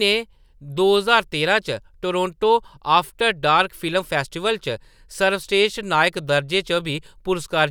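There are no technical faults to describe in this speech recording.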